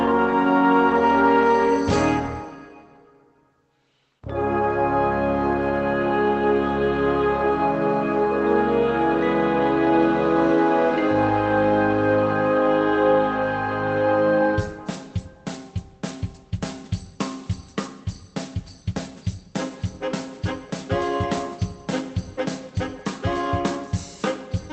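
No technical faults can be heard anywhere in the clip. The sound has passed through a WebRTC call path whose high end stops at about 8 kHz, which fits an Opus codec at roughly 20 kbps, and that codec leaves its usual coding noise.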